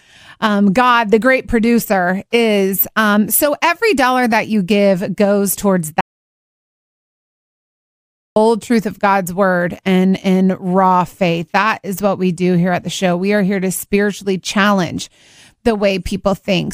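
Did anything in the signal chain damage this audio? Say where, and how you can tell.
Yes, there's an audio dropout to silence from 6.01 to 8.36 s. The speech cuts off right after "you give goes towards" and returns at "truth of", with about 2.35 s of dead silence and no room tone. That's likely an input-side loss, such as a disconnected device or a dropped link, while the recorder kept writing.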